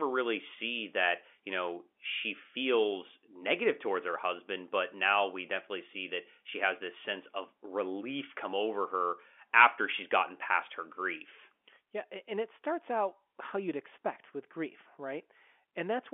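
Nothing goes wrong here at all: the speech comes over an ordinary G.711 mu-law telephone line at 64 kbps, so it sits in the usual narrow phone band of 250 Hz to 3.4 kHz, which is just how a call sounds rather than anything amiss.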